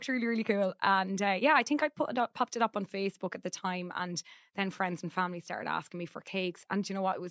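A short speech recording with no technical faults to be heard anywhere in the signal.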